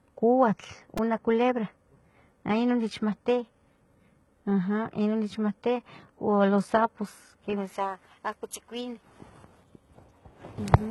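Throughout this speech clip the treble sounds synthetic: s sounds come out gritty and lispy, the upper band has a metallic sheen that doesn't quite belong to the voice beneath it, and nothing at all is present above 11.8 kHz. The damage is heavy, and the likely cause is HE-AAC compression at a very low rate, one that fits around 16 kbps. Only the lower spectrum is truly coded. The highs are rebuilt by copying lower bands upward under a coarse envelope, so the replicated harmonics fail to line up with the real ones at the crossover. At 0.98 s a brief buzzing click interrupts the audio, a repeated buffer. When fresh audio failed to arrive, the same tiny slice, about 2.9 ms long and fitting a 128-sample buffer, was played four extra times back to back. Each hard join adds an edge, so the result is heard as a buzz rather than a stutter, with roughly ten milliseconds of the original audio missing.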